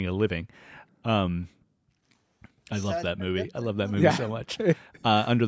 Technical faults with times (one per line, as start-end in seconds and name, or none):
3.14-4.35 speech suppressed in double talk
4.52-4.58 echo leak